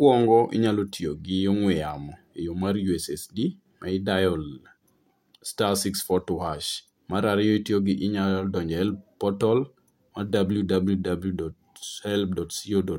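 Nothing in the recording stood out as a technical problem on listening.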